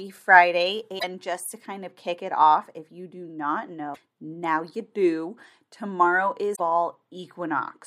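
Three short bursts of damaged data in a compressed stream break up the speech. The first runs from 0.96 to 1.04 s, just before "just to kind of". The second falls at 3.91 to 3.98 s, between "if you do not" and "now you do". The third is at 6.52 to 6.60 s. Each lasts under a tenth of a second. Corrupted bytes make the decoder misread frames and lose sync. It produces a brief chirp, squawk, click or short hole until it finds the next valid frame header.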